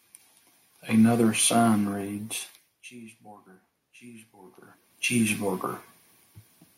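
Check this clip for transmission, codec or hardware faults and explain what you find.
No transmission, codec or hardware faults.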